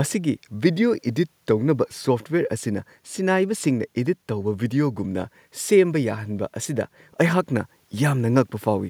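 No faults detected anywhere in the speech recording.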